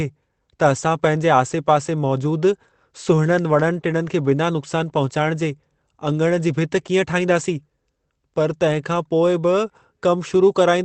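Around 1.19 to 1.21 s there's a lost packet rebuilt from error correction: one 20 ms packet went missing, and the decoder filled in from the low-bitrate copy riding in the next one. No gap, just a brief rougher, noisier patch in the speech, heard through the Opus call path's 8 kHz bandwidth.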